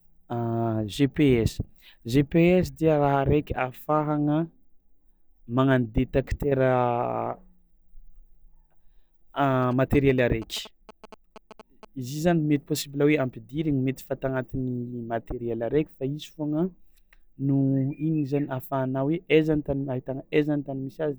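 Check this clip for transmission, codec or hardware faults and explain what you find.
One fault turns up here, GSM signalling bursts. From 9.63 to 11.85 s there's a galloping dit-dit-dit of short buzzes repeating at about 217 Hz, sitting roughly 20 dB under the speech. A nearby 2G phone is sending short signalling bursts, and the audio circuitry rectifies that radio energy into audible noise.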